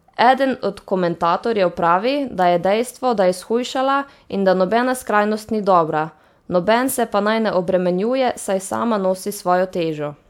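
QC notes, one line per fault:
No faults heard.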